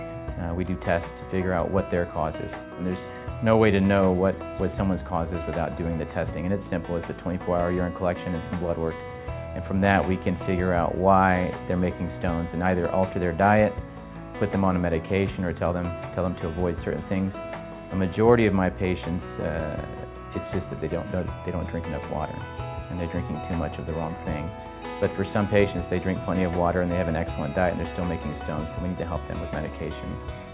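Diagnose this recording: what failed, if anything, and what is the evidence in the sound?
Nothing in the signal chain appears to have failed: level, continuity and timing stay steady throughout, with no audible breaks, distortion or interference at any stage.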